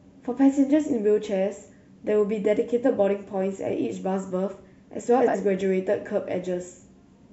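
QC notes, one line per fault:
5.20–5.35 s, frames out of order: two adjacent blocks of roughly 70 ms each play swapped, so the later half of this stretch sounds before the earlier half. The result is a brief garbled flutter in the speech. Each block's length fits a run of three codec frames. No audio is lost.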